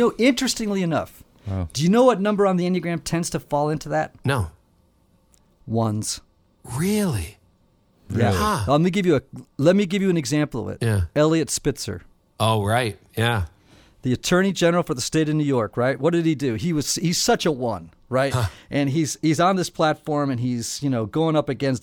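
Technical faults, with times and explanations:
2.61 to 4.40 s, drift correction step: after "know what number on", speech runs about 5.4% fast and rises 90 cents, then snaps back. Likely a clock-matching rate change.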